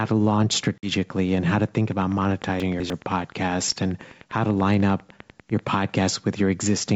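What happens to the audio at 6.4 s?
Nothing goes wrong at 6.4 s: the speech carries on intact through that moment, with the G.722 wideband coding at 64 kbit/s leaving at most a faint trace.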